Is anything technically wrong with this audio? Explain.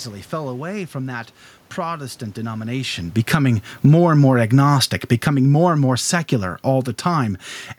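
Yes. From 2.65 s to 7.42 s the speech gradually sinks by about 9 dB, and the room noise sinks with it. This is automatic gain falling: the gain control judged the input too loud, or its background noise too strong, and steadily lowered its gain. The shift in level just before, around two and a half seconds, is the talker moving relative to the microphone, not a system fault.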